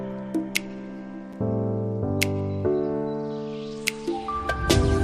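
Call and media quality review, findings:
Gap between stream segments at 1.33 s: short hard-edged dropout to silence, about 6.4 ms long. Segment boundary timestamps don't quite meet, so the player pads the hole with silence. Nothing's actually lost, just inserted. Timing is consistent with 1 s segments.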